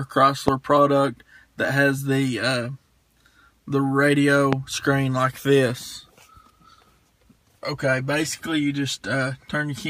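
A loud pop lands at 0.48 to 0.50 s and again at 4.53 to 4.55 s, each a single sharp click peaking roughly 20 dB above the sound, which carries on underneath. A brief voltage pulse, likely from a plug, switch or static discharge, caused it.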